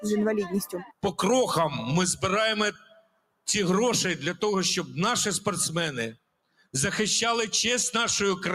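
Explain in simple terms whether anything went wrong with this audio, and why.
Throughout, the sound pumps and thins, with held parts sinking while sudden hits stay loud. This is a noise suppressor applied to music or sounds: a speech tool mistook steady tones and fading tails for noise and kept turning them down, by a swing of roughly ten decibels.

Three moments dip hard: 0.73 to 1.04 s, 2.72 to 3.47 s, and 6.15 to 6.74 s. This is sound cut by the noise suppressor, which judged these stretches to be noise and pulled them down far more than everything around them.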